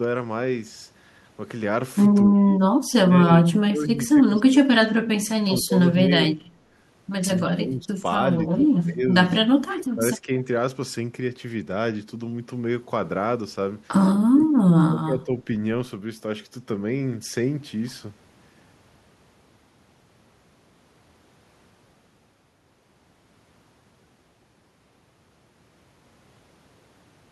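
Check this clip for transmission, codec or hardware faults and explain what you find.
The clip has one recurring fault, speech suppressed in double talk, at 2.25–5.06 s, 5.37–6.4 s, 7.55–7.9 s, 8.46–9.14 s, 9.5–10.3 s, 14.31–14.55 s and 14.86–15.46 s. The likely cause is an echo canceller that heard both ends talking at once, could not tell this talker from returning loudspeaker echo, and turned everything down. The speech dips and breaks up in pieces. The first and longest stretch is the worst, falling by about 30 dB, and the later ones sink by about 15 to 25 dB.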